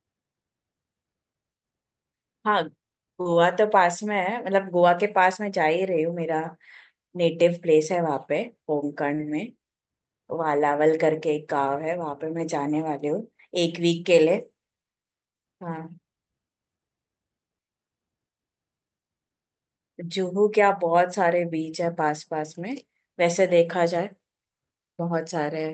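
At 3.21 s and again at 9.15 s, short concealed packet loss leaves a brief smear: about 40 ms of audio never arrived, so the receiver stretched the preceding sound to fill the hole. Unlike a plain dropout, there is no silence, only a blurred wobble.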